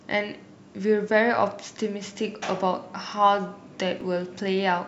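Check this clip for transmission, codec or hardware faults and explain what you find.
One fault stands out: a dropped buffer (overrun) at 4.01 s in the speech. The audio skips ahead by a millisecond or two. The likely cause is that the samples weren't read out before the hardware overwrote them, so the surrounding audio is spliced directly together. A waveform would show an abrupt discontinuity, and a spectrogram a thin vertical broadband line.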